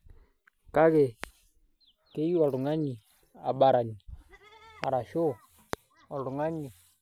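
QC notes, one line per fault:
1.24–1.26 s, 4.84–4.86 s, 5.73–5.75 s: loud pop, each a single sharp pulse some 15 dB above the speech, which continues underneath, unlike a dropout. Likely a switching or static voltage spike.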